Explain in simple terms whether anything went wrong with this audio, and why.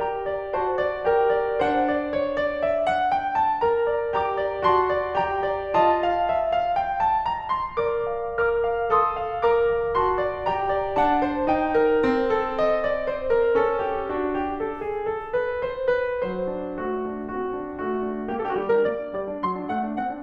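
Something does go wrong right at the end. From about 18.30 s to 20.22 s the music suddenly rushes ahead at roughly 1.89 times its normal pace, yet the pitch doesn't rise, so it sounds hurried rather than squeaky. That's a time-stretched section. Most likely, software squeezed that last stretch to fit a set length, keeping the pitch steady by dropping tiny slices of the audio.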